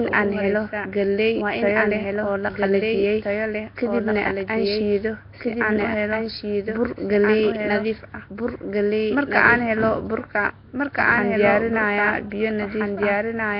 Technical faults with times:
0.00-13.60 doubled audio track
0.00-13.60 Nellymoser compression

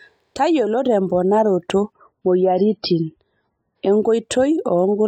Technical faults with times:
1.92-3.92 adaptive stream at a lower bitrate

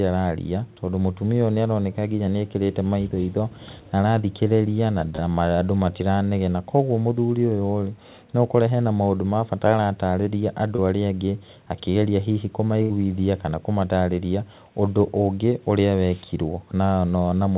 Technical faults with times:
5.16-5.20 short concealed packet loss
10.76-10.80 short concealed packet loss
12.82-12.91 burst of packet loss

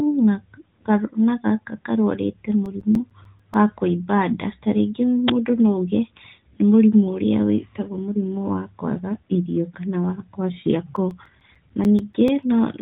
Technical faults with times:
2.51-3.54 CD scratch ticks
10.96-12.43 CD scratch ticks

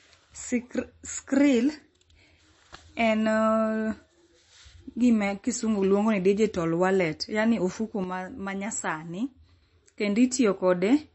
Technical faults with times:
0.00-11.14 MP3 compression
8.04-9.62 sudden gain jump

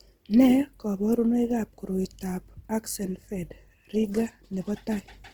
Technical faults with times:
0.00-5.33 Opus compression

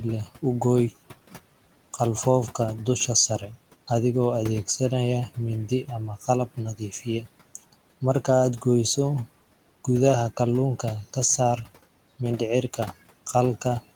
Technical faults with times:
0.00-13.95 noise suppressor artifacts
6.75-7.27 speech cut by the noise suppressor

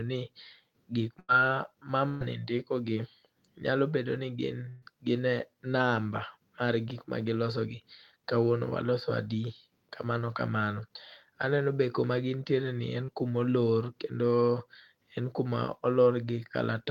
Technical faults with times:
1.19-1.30 burst of packet loss
2.08-2.22 burst of packet loss
4.68-4.84 burst of packet loss
13.04-13.10 short concealed packet loss

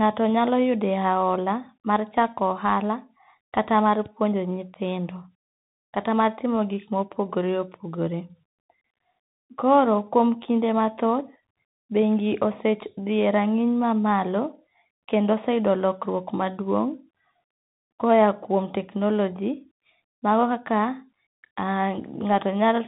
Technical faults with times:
0.00-22.88 Bluetooth CVSD headset codec

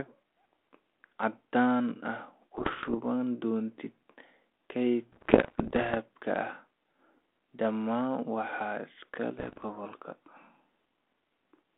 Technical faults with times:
2.54-2.95 bit errors on an ADPCM link
5.12-5.95 bit errors on an ADPCM link
9.39-9.64 bit errors on an ADPCM link

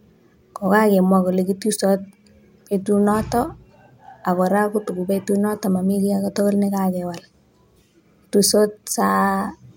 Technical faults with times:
none

